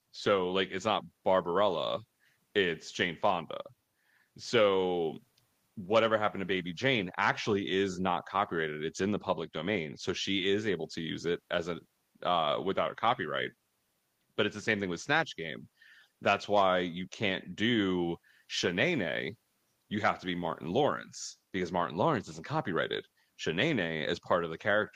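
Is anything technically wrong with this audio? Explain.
No, nothing technically wrong can be heard here.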